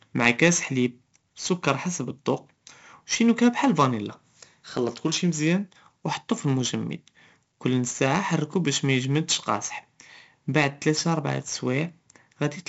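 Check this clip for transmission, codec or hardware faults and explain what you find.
One codec fault runs the whole length of this speech: 4-bit ADPCM compression. Each sample is coded as a coarse 4-bit step from a prediction, giving gritty hiss riding every loud syllable and rough attacks. The spectrogram shows noise filling loud regions and nothing above 7.7 kHz, which fits 64 kbps at a 16 kHz sample rate.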